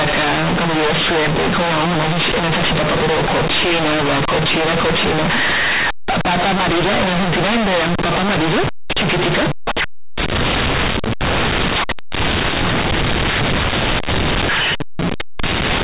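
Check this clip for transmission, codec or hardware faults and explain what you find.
One fault runs through the whole clip: companded audio read as linear. The A-law bytes are played as plain 8-bit samples without expansion, so every sign change throws the output across about half its range. Quiet and loud speech come out equally huge and buzzy, and pauses fill with heavy noise. Ordinary clipping or overdrive would leave silences quiet; here even the gaps roar. Underneath, the G.711 telephone coding at 8,000 samples a second, with nothing above 4 kHz, works as intended.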